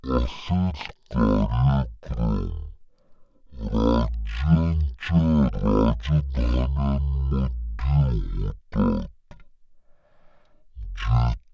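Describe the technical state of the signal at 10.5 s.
Wrong sample rate is the fault at 10.5 s, and it runs through the whole clip rather than starting there. The samples are being played back far slower than they were captured, with no rate conversion, so speed and pitch drop together by the same ratio: the speech moves at about 0.36 times its natural pace and sits about 17.6 semitones low. That ratio fits audio recorded at 44.1 kHz but played at 16 kHz, giving a deep, dragging sound.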